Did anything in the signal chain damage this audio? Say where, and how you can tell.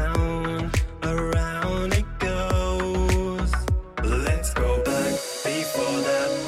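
No, nothing along the chain has left an audible mark on this recording.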